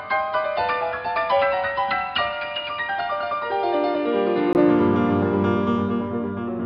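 From 0.0 to 4.55 s the audio is dull and band-limited, with nothing above 5.1 kHz, somewhat quieter, and carrying a noise floor roughly 35 dB down. After a 20 ms gap it opens up, which likely points to an input switched to a poorer device.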